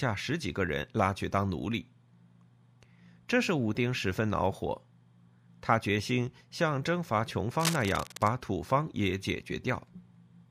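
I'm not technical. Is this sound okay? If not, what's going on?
No. From 7.60 to 8.29 seconds there is cable scratch noise, a rough scratching burst over the speech. A worn cable or connector being moved is the likely cause.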